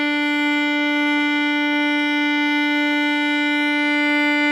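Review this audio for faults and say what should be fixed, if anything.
Nothing here needs fixing; the music has no faults.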